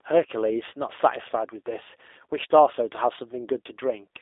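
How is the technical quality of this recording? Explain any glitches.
The quality is limited by one fault present throughout. From start to finish the speech sounds narrow, slightly rough and synthetic, with nothing above about 3.7 kHz and a telephone-like band of roughly 300 Hz to 3.6 kHz. This is G.729 codec damage, which fits an 8 kbit/s G.729A stream. The codec rebuilds each frame from a vocal tract filter, a pitch predictor and a few coded pulses, so the fine detail is replaced by a plainly audible synthetic texture.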